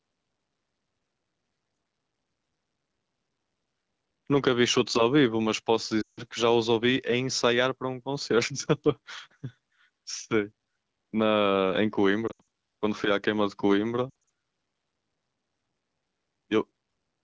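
Lost AMR speech frames hit at 6.01 to 6.22 s, 12.27 to 12.42 s and 14.10 to 14.12 s. Failed frames were replaced with repeated, fading speech. The first gap, about 160 ms, drops to near silence. The later ones are scattered, giving choppy warbling dips.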